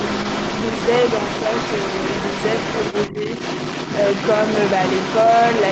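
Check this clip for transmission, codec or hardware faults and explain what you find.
Two faults are audible in the speech, both tied to echo cancellation.

Other side's voice leaking through runs for the whole clip. A second voice sits under the main talker, only a few decibels quieter. The far end was probably played on a loudspeaker near the microphone, and the echo canceller likely failed to subtract it. What is left comes through as a constant, competing voice, band-limited like the main one, with nothing above about 8 kHz from the call path.

Speech suppressed in double talk appears once, from 3.11 to 3.15 s. The talker's level briefly sags by around 5 dB, then recovers. The dip lasts only about 40 ms, so it sounds like a tiny hiccup in loudness. With both voices present together, the canceller could not tell its own talker from the loudspeaker echo. It most likely turned everything down for that moment.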